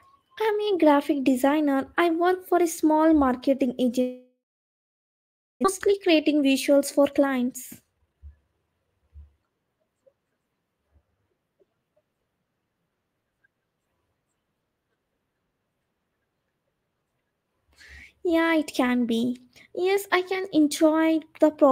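A long network dropout, likely a stall in packet delivery, interrupts this speech recording from 4.01 to 5.67 s: the receiver extends the last sound as a fading buzz or hiss, then leaves about 1.2 s of silence, and a full second of speech never returns. The dropout also left the jitter buffer holding roughly 0.7 s too much audio, so from 5.87 to 9.04 s a jitter buffer speed-up trims pitch-period-sized slices, about half a second in all, making the speech run at 118% speed, hurried but unchanged in pitch.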